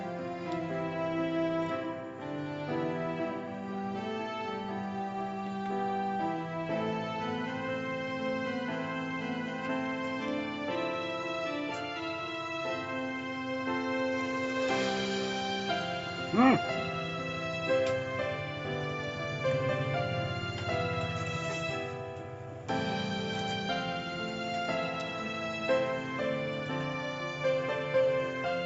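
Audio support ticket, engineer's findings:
No faults found; the audio is band-limited to about 8 kHz, consistent with a wideband call codec after the call's microphone processing, and nothing further needs action.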